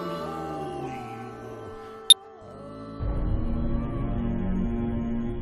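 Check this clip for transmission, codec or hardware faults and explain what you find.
Two faults, both of one kind: damaged data in a compressed stream, at 2.10 to 2.13 s (about 24 ms) and at 5.28 s. Corrupted bytes there cause the decoder to misread or reject frames and resynchronise on a later header, which breaks the sound with a brief glitch each time.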